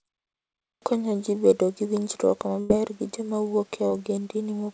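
At 0.73 s, after a pause of about 0.7 s, "ji bedo gi winjruok" begins with a clipped start after a pause: about 89 ms of onset is swallowed while the output wakes, so the waveform jumps straight from flat silence into speech.

From 2.60 to 2.72 s, between "ji bedo gi winjruok" and "gi joma wuok", a burst of packet loss removes 100 ms. The last sound is stretched into a fading buzz or hiss, visible on a spectrogram as smeared, decaying bands before an abrupt resumption.

From 3.88 to 3.93 s, just after "gi joma wuok", short concealed packet loss fills 30 ms with a brief synthetic continuation, heard as a quick smear or wobble. It shows as a short blurred patch in the spectrogram, whose band stops at 8 kHz throughout.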